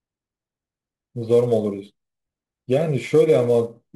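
Speech, with sample clock jitter throughout. A faint hiss and roughness ride on the signal. They grow on loud and bright sounds and vanish in pauses. An unsteady converter clock, wandering on the order of 10 µs, mistimes each sample. The error sits roughly 30 dB below the signal.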